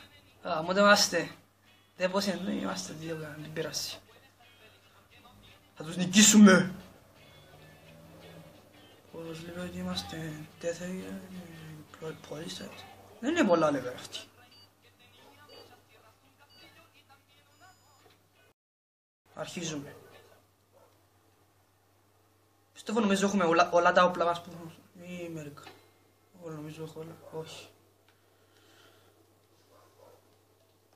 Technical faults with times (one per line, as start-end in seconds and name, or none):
18.52-19.26 rebuffering stall